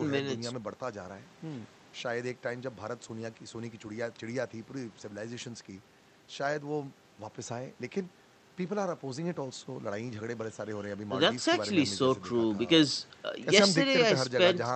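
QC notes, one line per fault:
No fault to note: one line, nothing logged.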